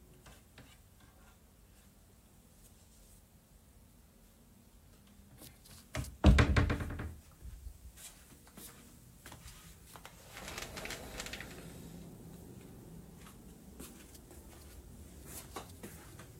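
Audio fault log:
No technical faults are audible in this recording of sounds, and the signal holds steady with nothing that points to a problem in capture, processing or playback.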